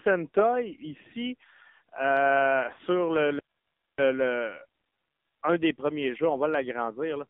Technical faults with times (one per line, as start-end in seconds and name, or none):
0.00-7.29 AMR narrowband mobile codec
2.74-2.79 lost AMR speech frames